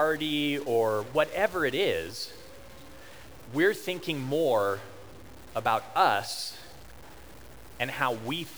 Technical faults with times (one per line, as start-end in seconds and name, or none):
0.00-8.57 stuck bit